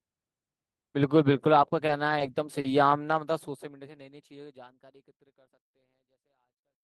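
A speech clip with three short stalls from late packets, at 1.86 to 1.90 s, 2.18 to 2.22 s and 2.60 to 2.66 s. Each time, the jitter buffer ran dry. The last sound was stretched, 20, 20 and then 40 ms, until the packet arrived. Nothing is lost, but the sound briefly hangs, before the smooth fade-out from around 3 s.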